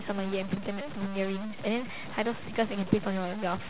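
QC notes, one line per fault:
Throughout: stuck bit. A distortion rides on the speech for the whole clip, and the pauses are filled with a steady noise bed where there should be near-silence. This is likely one data bit held permanently at 0 or 1. About half the samples then land off by that bit's fixed weight, in a pattern set by the waveform. Around zero the error flips with the sign of small values, which is why the gaps hiss instead of going quiet.
0.54–0.58 s: short concealed packet loss. Roughly 20 ms of audio did not reach the decoder in time, and the receiver covered it with about 21 ms of synthesised continuation. It extended the preceding sound, pitch-based if voiced and shaped noise if not, then crossfaded back into the real signal. The result is a brief smear or wobble at that point, and any short consonant falling inside the gap can disappear. The band stops at 4 kHz, as expected on a G.711 mu-law call path.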